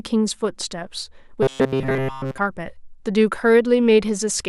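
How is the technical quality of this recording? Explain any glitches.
There is one clear glitch: robotic sound from repeated short buffers between 1.43 and 2.38 s. The speech collapses into a rigid, metallic buzz at about 133 Hz that loosely tracks the words. This is likely a starved playback stream repeating a roughly 7.5 ms block in place of the missing audio, which is why the pitch stays fixed.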